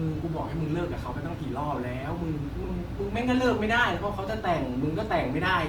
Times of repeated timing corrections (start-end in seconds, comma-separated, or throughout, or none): none